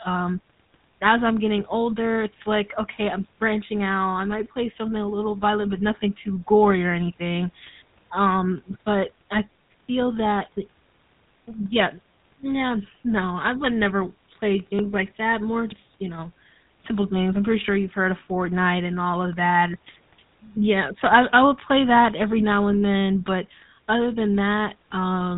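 Speech processed by the GSM full-rate codec, audible from start to finish: the excitation is reduced to a sparse regular pulse train feeding a vocal-tract model, leaving a plainly audible buzzy, grainy texture, and the band stops at 3.8 kHz, consistent with a 13 kbps GSM channel.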